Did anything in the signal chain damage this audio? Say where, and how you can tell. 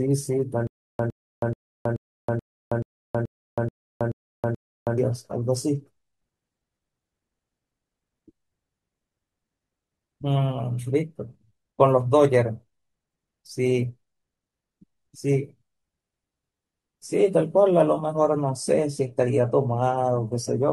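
Yes. Playback stage: from 0.67 to 4.98 s, a 108 ms burst repeats ten times every 431 ms with digital silence between, likely a stalled player replaying its last fragment. The silence separates this stutter with silent gaps from a seamless loop.

Network stage: at 15.63 s codec artefacts abruptly rise, with no gap, through the end. This points to an adaptive stream at a lower bitrate, perhaps 96 down to 32 kbit/s, rather than gradual packet loss.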